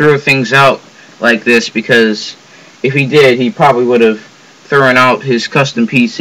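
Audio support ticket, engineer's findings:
Hard clipping, whole clip. Crackle and fuzz on louder passages, present from start to end. Probable component: a converter, number format or gain stage overdriven by about 9 dB. Peaks cut flat; roughly 3 percent of samples over the limit. Waveform: flattened, squared-off tops on loud sections. Spectrogram: added harmonics spreading far up the spectrum, showing as vertical smearing above the normal content wherever peaks occur.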